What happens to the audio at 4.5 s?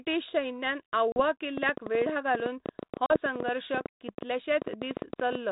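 Irregular ticking and popping, roughly eleven clicks a second and well above the speech, runs through 4.5 s as part of a train of clicks from 1.58 to 5.36 s, likely from electrical interference or a faulty connection.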